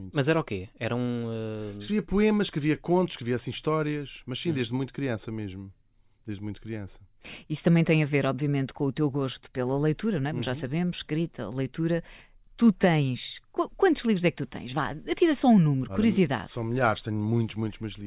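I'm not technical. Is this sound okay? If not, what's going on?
Yes, the recording is in good technical shape, with nothing going wrong in how the sound was captured or carried at any point in the clip.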